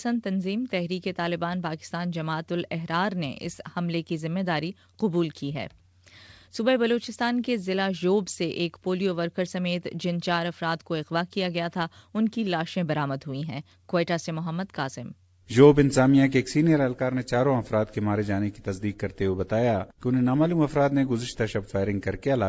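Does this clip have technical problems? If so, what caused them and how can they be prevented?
No, nothing stood out as a technical problem on listening to this audio, so there is nothing here that needs preventing.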